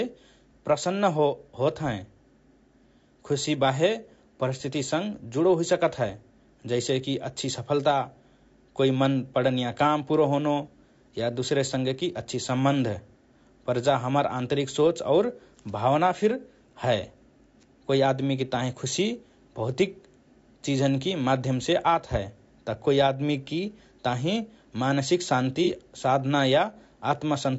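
Throughout, the speech was likely squeezed through low-delay AAC compression, which fits AAC-ELD at around 32 kbps; at this low bitrate noise fills in between the harmonics, leaving a plainly rough, grainy voice with a dulled top band. At 25.64 to 25.69 s, AAC frame loss with concealment: one frame's worth of data went missing, and the decoder patched the gap from the preceding spectrum, producing a brief smeared, noisy blip.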